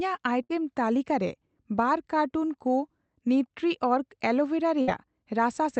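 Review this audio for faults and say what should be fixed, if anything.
Two bursts of packet loss break up the speech: at 0.43 to 0.52 s, just before "ᱛᱟᱹᱞᱤᱠᱟ ᱨᱮ ᱵᱟᱨ", and at 4.81 to 4.90 s. Each time the receiver extends the last sound for about 60 ms as a decaying buzz or hiss, then playback resumes about 60 ms further on, so that stretch of speech is lost. More jitter-buffer headroom or in-band forward error correction on the call link would prevent this.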